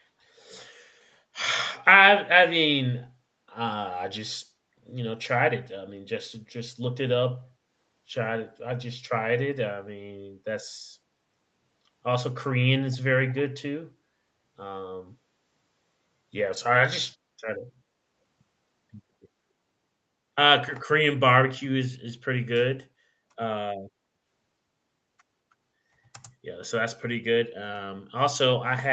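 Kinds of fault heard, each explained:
Echo leak: a far-end echo canceller likely passed some of its loudspeaker pickup back, leaving a very faint copy delayed about 217 ms in the first 0.05 s.
Call bitrate drop: the bandwidth estimate fell, pushing Opus from 32 to 18 kbps between 6.35 and 10.43 s, so speech sounds coarser and rougher, almost watery.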